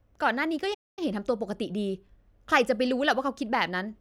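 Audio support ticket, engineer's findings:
Speech cuts to silence 0.74–0.99 s, roughly 230 ms gap, then resumes. Playback stall, likely player buffer underrun or blocked audio thread starving output.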